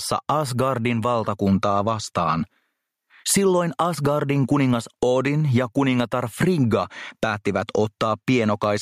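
Gain pumping runs through the whole clip, most likely from input gain set far too high and a fast limiter clamping down on each loud sound. The gain swings by around 15 dB, leaving the level squashed and breathing.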